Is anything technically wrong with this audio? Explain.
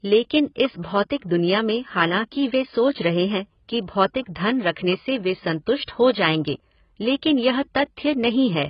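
Yes. The speech carries heavy damage throughout that sounds like AAC compression, and two brief pre-echo smears occur.

Throughout the clip the audio is dull, with nothing above about 5.4 kHz, and it has a warbly, smeared texture on sustained sounds and sibilants. The likely cause is AAC-LC coding at a very low rate, which fits roughly 16 kbps. At that rate the encoder lowers its cut-off and spends too few bits on each band, so detail collapses into a fizzy wash. A simple low-pass filter would also remove the top, but it would not make the remaining band warble.

Pre-echo appears from 4.72 to 4.77 s, just before "से वे", and again from 5.85 to 5.88 s, after "से वे" and before "हो जाएंगे लेकिन यह". Each is a short hiss about 46 ms and 29 ms long that runs ahead of the attack. The transform block spreads the quantisation noise sized for the loud onset back into the quiet moment before it, so the attack arrives softened. 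A click or dropout would sit on the attack instead of leading into it.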